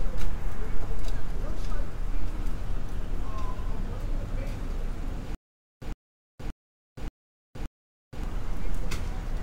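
From 5.35 to 8.24 s comes a stutter with silent gaps: a 107 ms burst repeats five times, each followed by 471 ms of digital silence, every 578 ms, likely a stalled stream replaying its last fragment. Unlike a single dropout, the identical repeating burst gives it away.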